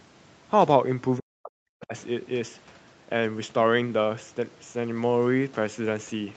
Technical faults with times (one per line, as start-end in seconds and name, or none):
1.18-1.94 speech suppressed in double talk